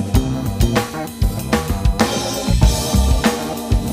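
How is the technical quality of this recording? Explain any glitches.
The recording has one fault, a USB whine running from 0.33 s to the end. It is a fixed-pitch tone built on 1 kHz, strongest at its 4 kHz multiple and roughly 25 dB below the sound. The bus draws current in 1 ms frames, and that current leaks in through power or ground. Mains hum sits at 50 or 60 Hz, but this whine is far higher and never drifts in pitch.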